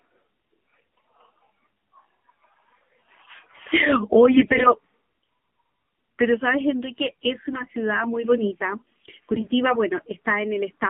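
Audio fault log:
throughout, AMR narrowband mobile codec: the speech sounds thin, boxed-in and plainly buzzy, with nothing above about 3.4 kHz and little below 200 Hz. Its coarse, synthetic edge points to a low AMR-NB mode, around 7.4 kbps, rebuilding the voice from a sparse pulse model.
0.97 s, 4.34–4.74 s, 7.50–7.75 s and 9.34–9.51 s, AMR bit errors: the voice keeps roughly its pitch and loudness but turns briefly hoarse, scratchy and gargly. Bits flipped on a weak link put the excitation pulses in wrong places and skew the finer pitch, gain and spectral values.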